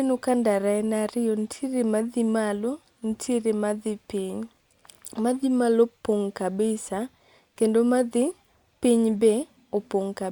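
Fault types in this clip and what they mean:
No faults can be heard.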